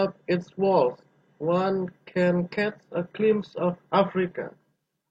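An adaptive stream at a lower bitrate takes over from 1.52 s onward. The connection slowed, so the player switched to a leaner version, consistent with a drop from about 96 to 32 kbit/s. The switch is abrupt, with no gap, and codec artefacts rise.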